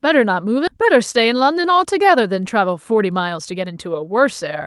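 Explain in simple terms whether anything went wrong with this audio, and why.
At about 0.67 to 0.69 s the speech jumps forward with no pause to cover it. This is a skip ahead: a stretch of roughly seven tenths of a second never reached the listener, either lost on the way or thrown out by the receiving side's jitter buffer because newer audio was already queued. The audio on either side of the missing piece is joined almost directly, so part of what was said simply vanishes.

From about 0.78 s to 3.88 s the speech runs about 6 percent fast, which is a jitter buffer speed-up. The receiver was holding more audio than it wanted, which adds delay. To catch up, it repeatedly trimmed tiny slices, each a single pitch cycle or a few, removing around a fifth of a second in total. The pitch stays the same, but the talking sounds slightly hurried. The call codec, Opus, carries sound up to about 12 kHz here.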